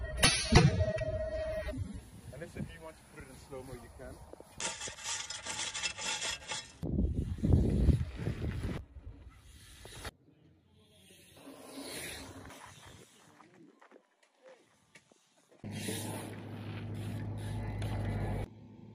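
From the start to about 2.0 s the player is running an adaptive stream starting at a low bitrate: it opens on a cheap version to begin playback fast, then switches up once it has gauged the connection. For those first two seconds the treble is missing or synthetic and coding artefacts are stronger, which fits a low-rate AAC stream around 24 kbit/s. At 2.0 s quality jumps abruptly, without any gap, to a fuller rendition consistent with roughly 96 kbit/s.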